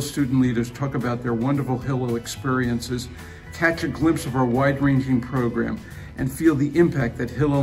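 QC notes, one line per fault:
Throughout: mains buzz, a steady, raspy 50 Hz buzz sitting roughly 25 dB below the sound. Sharp switching spikes from something like a dimmer or rectifier land twice per mains cycle, so the rasp pulses at 100 Hz and carries harmonics of 50 Hz up into the kilohertz range. That bright, edgy quality separates it from plain hum, which stays a smooth, low tone with little energy above the first few harmonics.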